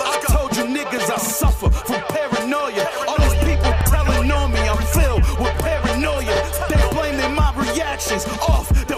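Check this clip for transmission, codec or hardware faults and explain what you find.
One fault is present: overlapping chunks, at 1.26–1.31 s, 3.81–3.86 s and 6.36–6.41 s. Blocks of 2.5 s each restart early, so about 48 ms plays twice, heard as a regular stutter.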